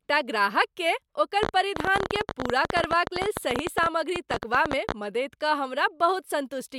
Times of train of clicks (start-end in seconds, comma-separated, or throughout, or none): 1.43-4.93